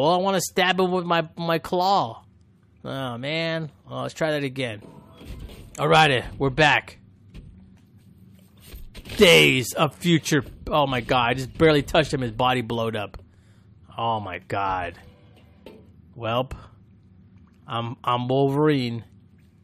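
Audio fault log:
No faults detected.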